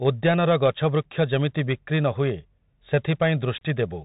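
From start to finish the speech carries the sound of a Bluetooth CVSD headset codec, and the damage is plainly audible. Each sample is reduced to a single up-or-down bit with an adapting step, which fits a 64 kbit/s CVSD link. Nothing survives above 4 kHz, so the spectrogram shows a hard ceiling there. Sibilants turn scratchy, loud bright moments overload the slope and distort, and a granular hiss fills the waveform's quiet stretches.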